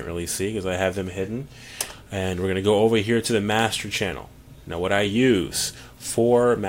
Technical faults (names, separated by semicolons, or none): none